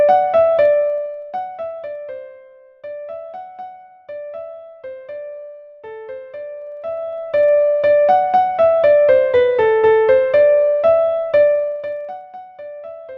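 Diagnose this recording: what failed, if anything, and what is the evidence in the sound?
Zipper noise at the gain stage, during three level moves: down about 20 dB from 0.53 to 2.03 s, up about 20 dB from 6.59 to 7.53 s, and down again from 11.41 to 12.27 s. The gain jumps in 1 dB steps, roughly fifteen to twenty per second, with no smoothing. Each step clicks. Unlike dropout clicks, the ticking tracks only the level ramps.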